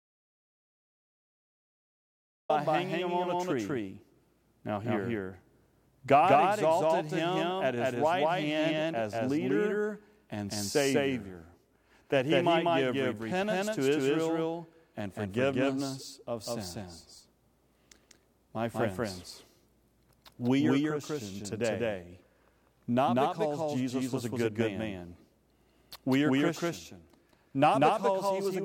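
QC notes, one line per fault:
Throughout, doubled audio track: every syllable is followed by a full-band copy of itself roughly 200 ms later, at about the same level, giving a dry slapback with no room colour or decay. Two copies are likely being mixed in at a fixed offset.
0.00–2.49 s, audio dropout to silence: the clip opens in silence with no room tone, and speech cuts in abruptly at "hanging him on a". The input was likely already lost when recording began, so silence was written until the signal returned.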